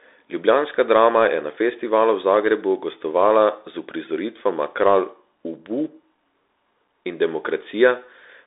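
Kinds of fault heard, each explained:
Bluetooth CVSD headset codec: one-bit slope coding of speech leaves a granular hiss and scratchy s sounds, with nothing above 3.8 kHz and a narrow 300 to 3700 Hz band.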